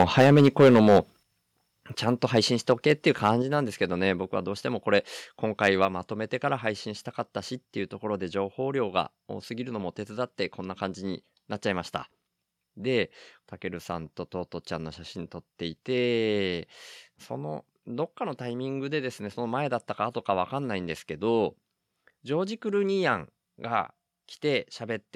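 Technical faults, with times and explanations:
0.00–0.99 s, 2.24–2.38 s, 2.69–3.29 s, 5.64–5.85 s: microphone overload, with harsh crackle on the loudest syllables. Peaks likely exceed converter full scale, by about 12 dB at first with roughly a tenth of samples flattened, later by about 2–3 dB.
0.22 s, 1.23 s, 3.42 s, 5.85 s: microphone volume stepped down, with sudden level drops of about 2, 7, 4 and 3 dB affecting both voice and background, likely from software reducing input gain after clipping.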